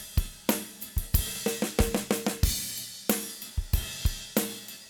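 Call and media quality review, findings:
No faults found. Nothing in the audio needs a ticket entry.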